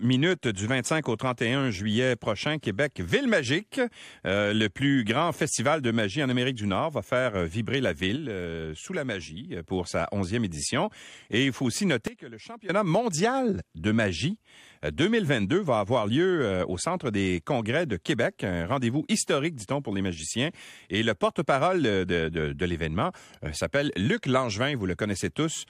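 At 8.16 s the speech and its background noise drop together by about 6 dB, holding until 9.64 s; at 12.08 s both fall by about 17 dB until 12.69 s. These sudden gain jumps likely come from a digital gain change applied without a ramp.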